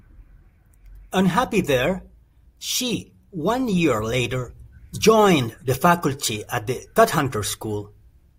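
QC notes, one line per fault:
No faults found in the speech. Nothing heard calls for a QC note.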